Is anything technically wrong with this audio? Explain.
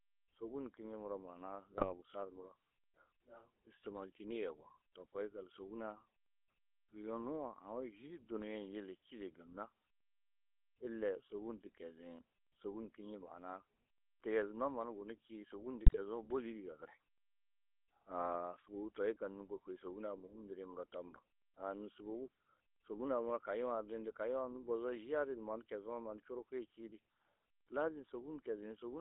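Yes. GSM full-rate codec damage runs through the whole speech clip: the band is held to roughly 300 Hz to 3.5 kHz, and the coder rebuilds the voice from a vocal-tract filter fed by sparse, regularly spaced pulses. This gives the plainly audible buzzy, gravelly roughness of a 13 kbps full-rate stream.

GSM bit errors strike at 1.78 to 1.93 s and again at 15.86 to 15.99 s. Corrupted filter, pitch or gain values reach the decoder for a few frames, warping the spectrum and jolting the level, so the speech briefly breaks into squawks, pops and gargling.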